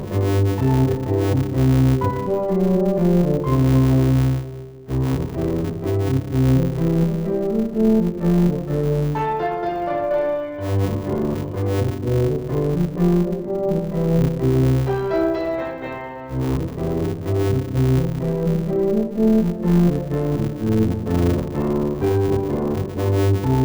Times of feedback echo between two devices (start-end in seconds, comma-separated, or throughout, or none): none